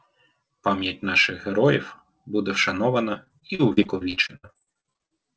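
Speech over a call path where nothing reaches above 8 kHz, which fits a wideband codec like G.722. From 3.14 to 5.12 s there's repeated packet loss with a robotic sound: about 25 short holes, none longer than 64 ms, each patched by stretching the previous sound. About 30% of that stretch ends up patched over, and the whole stretch sounds choppy.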